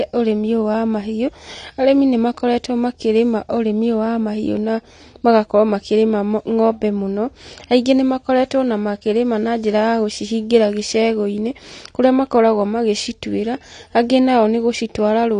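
AAC compression runs through the whole recording, from start to finish. Nothing is present above about 9.9 kHz, and the speech sounds dull and smeared, with a fizzy, warbling edge on sibilants and held vowels. The likely cause is AAC-LC encoding at a low bitrate, which fits roughly 32 kbps: with too few bits for each frame, the encoder drops the top of the spectrum and quantises the remaining bands coarsely, leaving gaps that are plainly audible.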